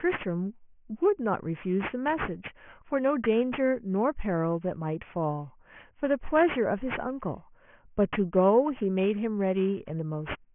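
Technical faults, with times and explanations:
Throughout, aliasing: speech above 3 kHz folds back beneath it, which fits an unfiltered drop to a 6 kHz rate, so sibilants turn gritty and metallic.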